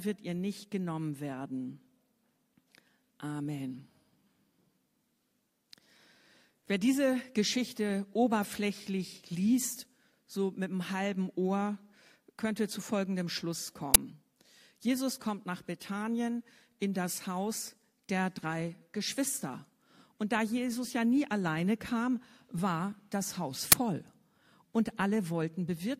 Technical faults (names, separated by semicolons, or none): uninitialised buffer